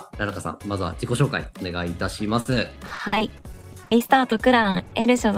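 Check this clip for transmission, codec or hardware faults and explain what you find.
One transmission fault is present. From 2.40 to 5.19 s there is repeated packet loss, heard as robotic sound. Packets keep going missing, and each hole is patched by extending the last sound. That makes about a quarter of the stretch concealed, with gaps up to 50 ms. The audio turns choppy, with pieces missing.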